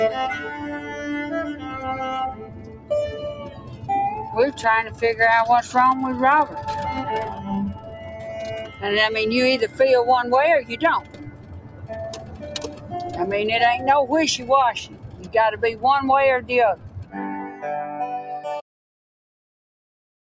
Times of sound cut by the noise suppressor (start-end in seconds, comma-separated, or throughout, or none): 2.33-2.90, 3.36-3.89, 4.55-5.02, 7.33-8.27, 8.65-8.83, 10.63-12.94, 14.85-15.34, 16.41-17.15